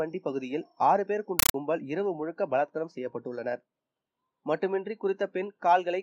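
From 1.39 to 1.54 s the audio is replaced by very loud, chattering static made of 8 ms noise bursts repeating 31.25 times a second. This is a compressed stream played as audio: an AC-3 (Dolby Digital) stream, fitting a 384 kbps encode, was treated as ordinary samples instead of being decoded.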